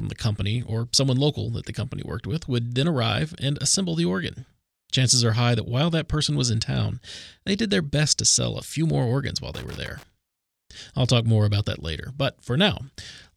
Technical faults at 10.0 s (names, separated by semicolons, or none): loose connector crackle